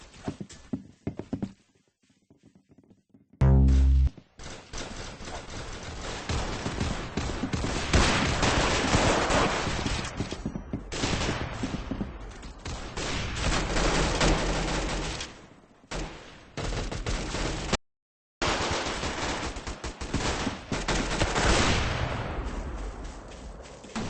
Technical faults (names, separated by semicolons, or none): audio dropout to silence